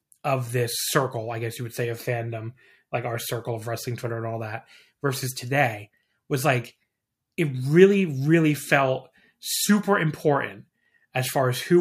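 No technical faults can be heard anywhere in the recording; the signal stays continuous and steady throughout.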